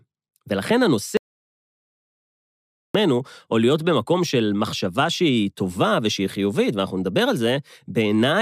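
The input feed was likely lost, through a dropped connection or mute, while recording continued writing silence. The result in this speech clip is an audio dropout to silence from 1.17 to 2.95 s: about 1.8 s of dead silence with no room tone, and that passage is simply gone.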